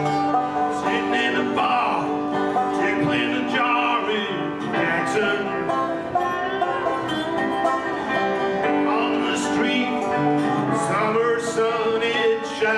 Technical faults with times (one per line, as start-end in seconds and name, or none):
none